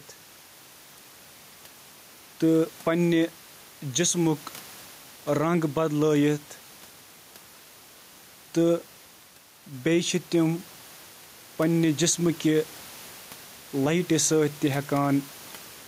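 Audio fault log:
throughout gain pumping: input gain likely set far too high, so a fast limiter clamps down on every loud syllable and the level swings by around 5 dB. Room noise sits about 29 dB below the speech, and the dynamics are squashed.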